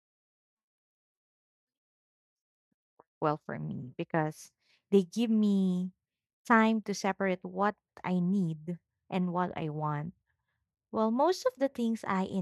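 A speech recording with no technical faults to report. Nothing in the audio calls for a time, a value or a cause.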